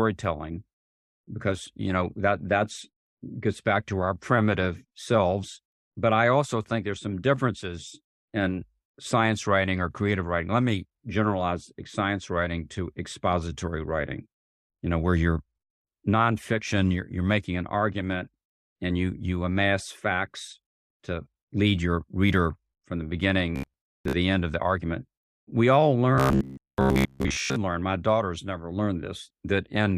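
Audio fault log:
23.56–24.17 s, robotic sound from repeated short buffers: after "your reader from the", before "end of the argument", the sound turns to a rigid, metallic 67 Hz buzz, likely from a roughly 15 ms chunk replayed over most of the span. The waveform shows identical repeating cycles, and the spectrogram shows evenly spaced horizontal harmonic lines.
26.15–27.58 s, robotic sound from repeated short buffers: before "learn my daughters never", the same 67 Hz metallic buzz returns for about 1.4 s, likely from short buffers repeated in place of most of the real audio. The waveform looks cloned and periodic, and the spectrogram shows a rigid harmonic comb.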